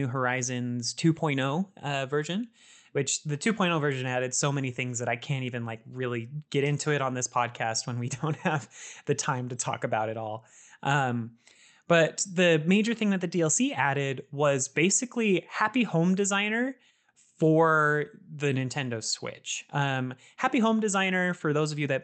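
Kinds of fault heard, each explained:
Nothing here counts as a fault; the speech just comes through an ordinary Opus call link, with the top end rolling off around 8 kHz as you'd expect from that setup.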